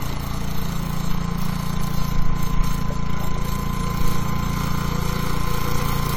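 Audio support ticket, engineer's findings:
Swirly, smeared texture across the whole clip; hollow, phasey timbre; transients soft and blurred. Generation loss, likely from repeated AAC-LC re-encoding, consistent with about seven passes at 96 kbit/s. Each decode and re-encode requantises on a shifted frame grid, stacking noise and spectral holes. Bandwidth holds to 20 kHz, so the damage is smearing, not top-end loss.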